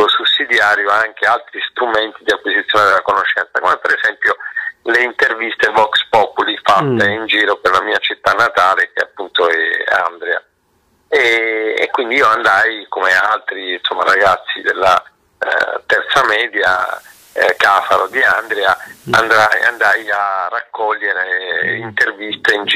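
At 16.69 s the digital radio blends to analogue FM over about 0.22 s and returns at 20.22 s. Hiss rises to roughly 30 dB below the signal and the level shifts by about 1 dB. Unlike a dropout, the sound never mutes.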